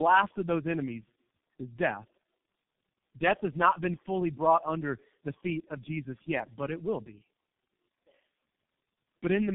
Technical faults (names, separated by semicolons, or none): tandem speech coding; dropped buffer (overrun)